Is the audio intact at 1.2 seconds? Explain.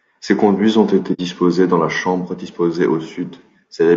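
No, it's right at the end of an AAC frame loss with muting, running from 1.13 to 1.20 s after "conduits ont été", fading back in before "dans les chambres disposés". That's about 60 ms zeroed, which fits a couple of lost frames. The whole clip also sounds rough and grainy, likely from low-delay AAC compression at a low bitrate.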